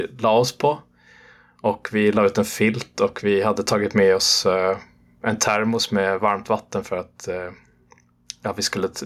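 Throughout the speech, the level pumps, lurching by around 10 dB between gaps and loud passages. Loud and quiet moments sit unnaturally close together, giving a squashed, pumping texture. This is gain pumping, likely from input gain set far too high, so a fast limiter or compressor clamps down on every loud sound and releases in the gaps.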